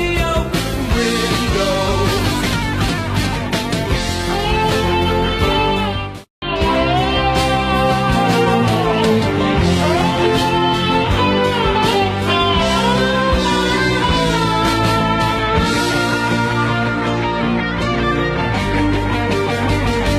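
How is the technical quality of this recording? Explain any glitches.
No glitches turn up anywhere in this recording. No working path is listed, so there is nothing further to point to here.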